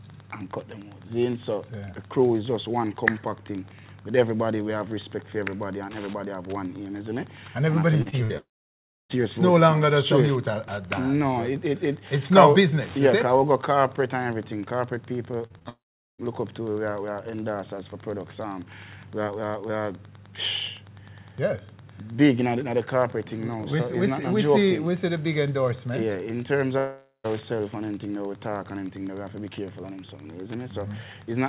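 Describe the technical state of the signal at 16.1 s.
At 16.1 s the signal is inside a long network dropout that runs from 15.69 s to 16.20 s. This was likely a loss of arriving audio. About half a second of sound never came through. The receiver bridged the gap by extending the last sound as a brief buzz or hiss that fades, then left near-silence for roughly the final 0.42 s. Unlike a clean edit or a mute, the decaying tail gives it away, and the audio resumes further on with that stretch missing rather than delayed.

Under this, and throughout, there is Wi-Fi interference. A nearby radio's beacon, repeating every 102.4 ms, is rectified by the audio circuit and heard as a steady ticking about ten times a second, sitting somewhere around 30 dB below the signal. Its regular click rhythm sets it apart from mains hum, which would be a continuous low tone rather than a train of discrete ticks.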